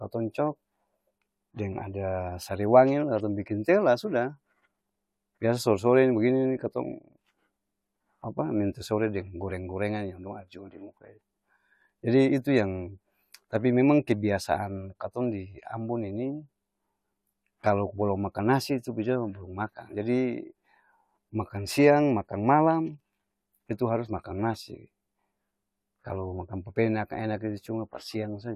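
No faults can be heard anywhere in the recording.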